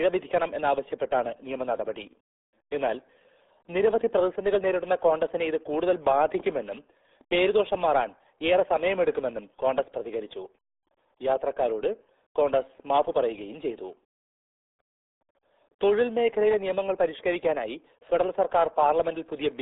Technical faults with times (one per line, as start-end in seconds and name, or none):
0.00-19.61 RealAudio 14.4 codec